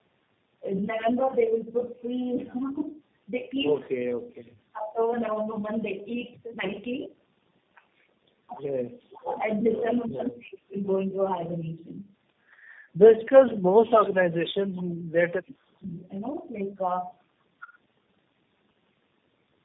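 From start to finish the speech carries the marks of tandem speech coding. It sounds like a call that passed through a chain of narrowband codecs, probably G.726, two rounds of AMR-NB at 7.95 kbit/s and a final G.729A stage, with G.711 links in between. That makes four lossy speech coders in a row, each re-encoding the previous one's output. The result is rough, muffled and warbly. On a spectrogram the energy stops sharply at about 3.8 kHz, and the formant bands look smeared and grainy rather than clean.

From 9.27 to 9.41 s a short echo leak appears. A faint copy of the speech returns about 355 ms after the original, roughly 10 dB below it. The likely cause is a loudspeaker at the far end whose echo canceller let part of the signal back through. It is heard as a brief ghost of what was just said. On the spectrogram the same harmonic shapes repeat, weaker and shifted later in time.

From 10.06 to 10.76 s the speech is suppressed in double talk. 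For about 0.7 s the level dips, at its deepest by around 35 dB. This is likely an echo canceller that could not separate the talker from the loudspeaker echo while both sides spoke at once, so it attenuated everything. The waveform shows a sudden, ragged trough in the envelope, and the spectrogram shows a matching drop in energy.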